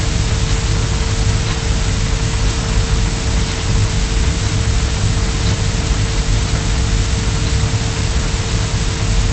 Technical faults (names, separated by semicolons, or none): none